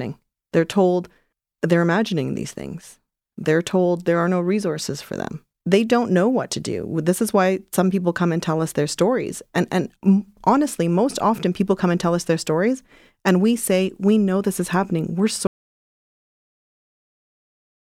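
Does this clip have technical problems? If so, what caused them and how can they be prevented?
Yes. At 15.47 s the input was likely lost, so an audio dropout to silence follows: the speech cuts off into silence, without room tone, to the end. Securing cables and links and locking mute controls prevents it.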